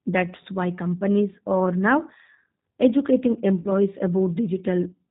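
Speech, heard through the G.729 codec for its whole length. The damage is plainly audible. Nothing above 4 kHz survives, and the voice sounds rough and slightly synthetic. The coder rebuilds each frame from a vocal tract filter, a pitch predictor and a few pulses, which fits an 8 kbit/s G.729A stream. From 3.60 to 3.72 s there is VoIP packet loss concealed by the speech codec. About 50 ms of audio is missing, consistent with five lost 10 ms frames. The decoder keeps repeating its last pitch and filter at falling gain. This turns the gap into a fading, stretched smear, and the voice stays weak briefly afterwards.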